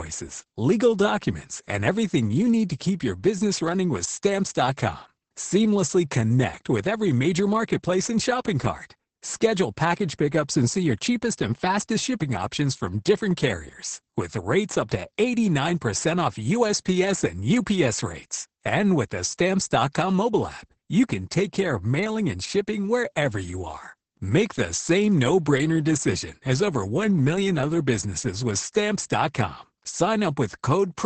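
Throughout the clip the speech sounds muffled, hoarse and faintly robotic, with nothing above 8.7 kHz. This is Opus voice compression, heavily applied: the SILK linear-prediction coder, limited to wideband, codes the excitation coarsely, which fits a bitrate near 10 kbps.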